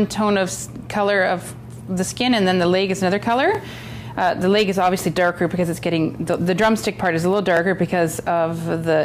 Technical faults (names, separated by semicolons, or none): overlapping chunks